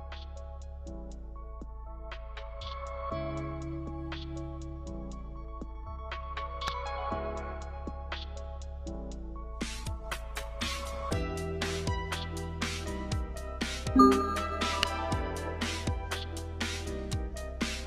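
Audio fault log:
9.79–11.35 s, call bitrate drop: the call's bandwidth estimate collapsed and the encoder was told to spend far fewer bits, consistent with a fall from roughly 128 kbps to about 19 kbps. For about 1.5 s at the bottom of the dip, Opus codes the signal much more coarsely and trims away the upper frequencies, so the sound turns muffled, rough and watery. It then clears again as the bitrate recovers by 11.35 s.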